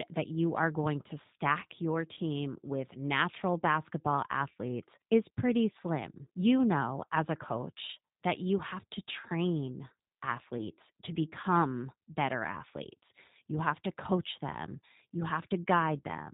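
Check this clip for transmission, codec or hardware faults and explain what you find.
The speech carries two faults: a G.729 codec throughout, and VoIP packet loss concealed by the speech codec twice.

G.729 codec, whole clip: a pulse-excited vocal tract model that cuts everything above 4 kHz, so speech sounds rough and synthetic, which fits 8 kbit/s. Unlike plain band-limiting, the roughness sits inside the voice itself.

Packet loss concealment, from 2.14 to 2.20 s after "going to stack your" and before "with natural basketball athletes", and again from 10.58 to 10.62 s before "to become better athletes". The decoder extends its last pitch and filter into a fading buzzy tone or coloured noise, and the voice stays weak briefly afterwards. Unlike a dropout, there is no silence or click.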